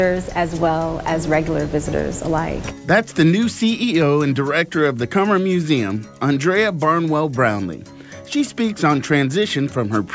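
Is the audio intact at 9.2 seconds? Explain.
Yes, the audio is intact at 9.2 seconds, with no dropout, click, distortion or other fault audible at that moment.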